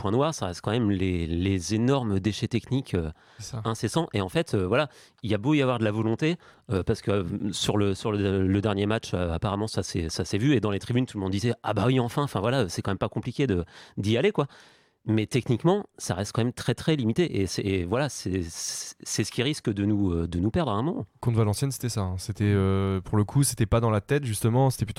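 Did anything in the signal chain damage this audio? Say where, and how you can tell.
No, nothing in the signal chain damaged this audio.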